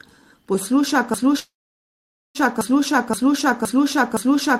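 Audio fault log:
1.14–4.6 s, broken-record loop. A fragment about 0.52 s long repeats exactly, back to back, until the clip ends. The sound that should follow never arrives. The stream likely stalled and kept resending the last piece it held.
1.39–2.38 s, call audio freeze. The last sound is stretched into a brief fading tail, then about 0.85 s of silence fills the gap. Nothing is lost. Playback resumes where it stopped, about 0.95 s late. Delayed packets likely emptied the jitter buffer.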